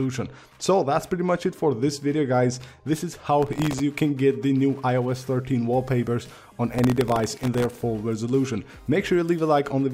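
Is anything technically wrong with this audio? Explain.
Yes. Processor overload crackle appears twice, from 3.43 to 3.80 s and again, longer, from 6.75 to 7.81 s. The processor couldn't finish its very short buffers, each under a millisecond, in time, and dozens of deadlines slipped in a row. Each miss repeats a scrap of old audio with hard edges, producing a gritty, tearing crackle over the sound. Unlike a single dropout or click, it is a dense run of tiny glitches that stops abruptly once the load eases.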